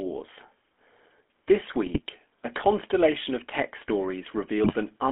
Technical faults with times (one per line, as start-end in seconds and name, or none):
0.00-5.12 GSM full-rate codec
1.86-2.00 GSM bit errors
4.63-4.74 GSM bit errors